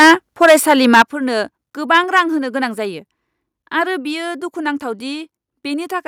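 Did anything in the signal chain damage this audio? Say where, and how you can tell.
Yes. Microphone overload at 0.0 to 0.13 s, 0.42 to 1.02 s and 1.94 to 2.21 s, at the converter stage. The loudest speech peaks sound flattened and crackly. The opening burst is hardest hit, about 9 dB over full scale with nearly a third of samples squared off. The second stretch is about 8 dB over, and the last only about 2 dB over with very few samples affected. The likely cause is input gain set too high, driving the converter past its ceiling so the peak tops are sliced off.

Microphone volume stepped down at 1.02 s and 2.04 s, in call processing. Right where the long distorted stretch ends, speech and background together drop abruptly by about 9 dB. At 2.04 s, inside the final overloaded stretch, there is a second, smaller drop of about 2 dB. These are single steps, not smooth fades. That pattern is likely the call software detecting clipping and cutting the device's input volume in one step each time, which explains why the later overload is much milder.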